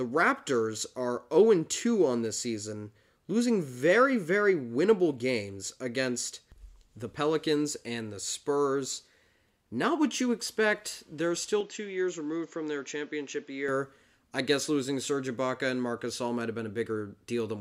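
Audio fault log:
11.61–13.68 s, input switched to a poorer device: sound dulls, nothing above 7.6 kHz, slightly quieter, faint new noise, no gap; likely a narrower-band microphone.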